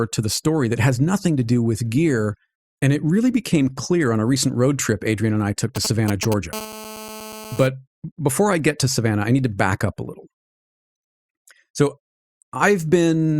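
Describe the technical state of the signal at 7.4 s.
At 7.4 s you're inside a GSM phone buzz that runs from about 6.53 to 7.67 s, ending just before "before I get to". A 2G handset on a call nearby is pulsing its transmitter about 217 times a second, and the audio circuitry rectifies those radio bursts into a hard, raspy 217 Hz buzz with lots of harmonics. It sits steady at about 14 dB below the speech and has nothing to do with it.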